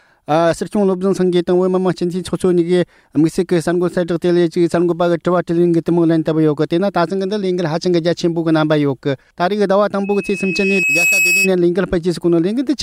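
Loudspeaker feedback squeal runs from 10.03 to 11.52 s. A microphone is picking up the loudspeaker it drives, and at 2.6 kHz the round trip through that loop returns more than it sends, so the tone feeds itself. It swells over roughly a second into a piercing single-pitched whistle that ends up about as loud as the rest of the sound before it stops at 11.52 s.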